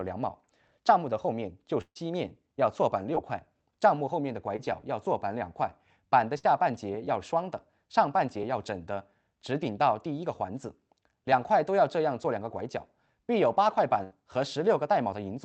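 Packets were dropped in runs at 1.81 to 1.97 s, 6.38 to 6.45 s and 14.03 to 14.13 s. Each burst of packet loss removes about 140 ms, 40 ms and 80 ms of audio. The receiver stretches the last sound into a fading buzz or hiss before skipping ahead. The first burst also leaves about 60 ms of silence.

At 3.15 to 3.18 s and 4.56 to 4.60 s, single short losses of about 20 ms were concealed by extrapolation and blended back. This short concealed packet loss gives a brief smear or wobble. The 8 kHz-limited call sound fits a low-bitrate Opus path.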